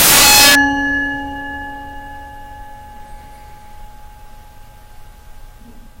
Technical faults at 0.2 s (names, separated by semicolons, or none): integer overflow